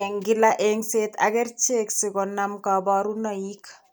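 No technical faults are audible in this speech.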